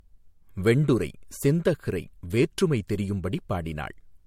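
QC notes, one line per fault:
throughout, generation loss: swirly, hollow speech with blurred attacks and no content above 16.5 kHz, likely from about four MP3 re-encodes, each quantising afresh.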